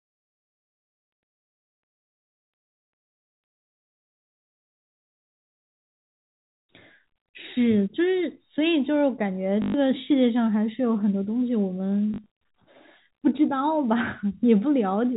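Packets carrying the speech went missing twice, and each time the receiver filled the gap by replaying the last packet it had, which is packet loss with the last packet repeated. From 9.62 to 9.74 s about 120 ms was lost in one run. The repeats seldom line up with the pitch, and the run buzzes at about 50 Hz, which fits 20 ms packets. From 12.14 to 12.26 s, 80 ms was lost in scattered runs of up to 40 ms. Both sound like short robotic stutters over the band-limited telephone sound.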